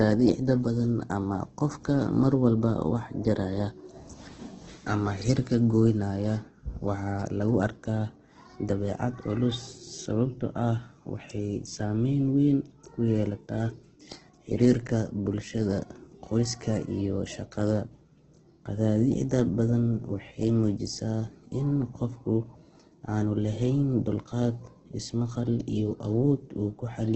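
Throughout, the speech sounds rough and grainy, likely from heavy Opus compression at a very low bitrate; a spectrogram shows nothing above 8.3 kHz, with noise-filled bands below.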